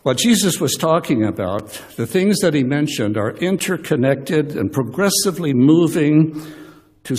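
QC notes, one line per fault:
1.59 s and 3.59 s, gap between stream segments: hard-edged silences of about 5 ms and 14 ms, two seconds apart, matching 2-second segment boundaries where timestamps left a hole. Unlike a dropout, no sound is lost; everything afterwards simply plays slightly later.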